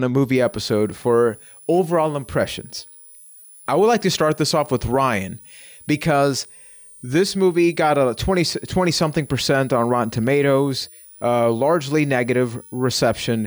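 From 0.35 s to the end at 13.47 s, a switching supply whistle sits under the speech: a high tone near 10 kHz, wandering between 9.25 and 10.59 kHz, roughly 25 dB below the speech. It comes from a switching power supply running in an audible burst mode or beating against another supply.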